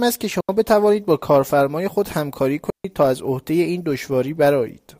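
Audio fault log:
0.41–0.49 s and 2.70–2.85 s, digital wireless dropout: the speech cuts to near silence for about 81 ms, then about 145 ms. The wireless link lost too much data, so the receiver muted with a very short fade. The holes are clean, with no noise burst on either side.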